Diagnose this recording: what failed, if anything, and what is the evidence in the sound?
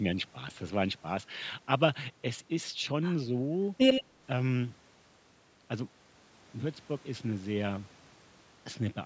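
Between 3.91 and 4.04 s the speech is followed by a delayed copy of itself, 90 ms behind and only a few dB quieter. This is an echo leak, likely from an echo canceller in call processing letting loudspeaker pickup through. A spectrogram shows the same harmonic stripes repeated 90 ms later.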